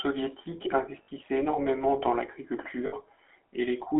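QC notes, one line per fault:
Throughout: GSM full-rate codec. The speech is limited to roughly 300 Hz to 3.4 kHz and carries a plainly audible buzzy, gravelly roughness. The coder models the vocal tract as a filter and excites it with a sparse train of regular pulses. It keeps only every third excitation sample, so fine detail in the source is replaced by a coarse, rasping texture. That character fits the 13 kbps full-rate coder.
1.02–1.09 s and 2.86–2.94 s: lost GSM frames. In each gap, about 60 ms of the signal turns into a held, metallic ring instead of continuing naturally. This fits three consecutive 20 ms frames going missing. The decoder fills the hole by reusing the parameters of the last good frame. The frozen spectrum sustains as a tonal smear until good frames arrive again.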